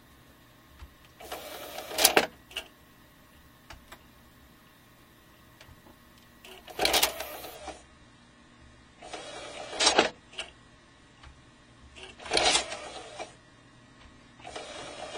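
At 7.55 s the treble abruptly drops away with no gap, nothing above 10 kHz. This is an adaptive stream at a lower bitrate, likely around 24 kbit/s, continuing to the end.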